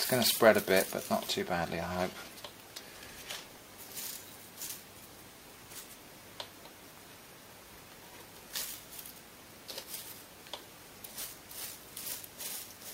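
No technical faults can be heard anywhere in the audio.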